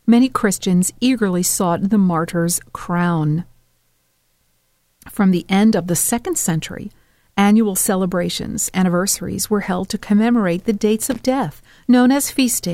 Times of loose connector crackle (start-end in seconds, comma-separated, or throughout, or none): 11.02-11.21